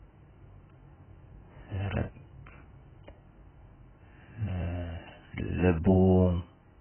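Speech that sounds dull and muffled from start to finish, with nothing audible above about 3.1 kHz and a warbling, smeared texture on sustained sounds and sibilants. This is heavy AAC compression, likely from the AAC-LC codec at a very low bitrate, a damage level that fits roughly 8 kbps. At that rate the encoder drops the upper spectrum entirely and quantises what remains so coarsely that gaps and substitute noise turn into watery artefacts.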